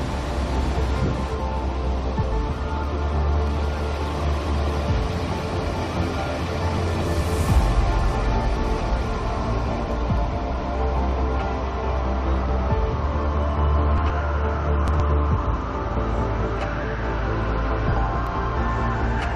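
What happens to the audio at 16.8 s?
Nothing goes wrong at 16.8 s; the audio plays through that moment intact, with no dropout, click or distortion.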